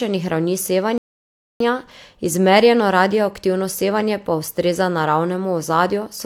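At 0.98 s the speech halts and falls into complete silence until 1.6 s, a rebuffering stall. The player exhausted its downloaded audio and waited for more to arrive, inserting about 0.62 s of dead air. What separates this from a dropout or lost packets is the restart: the speech picks up at exactly the point it stopped, with nothing skipped. The clip simply runs longer rather than losing material.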